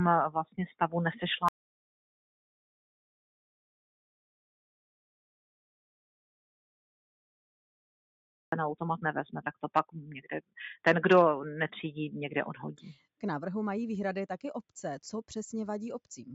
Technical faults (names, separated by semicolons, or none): noise suppressor applied to music or sounds; audio dropout to silence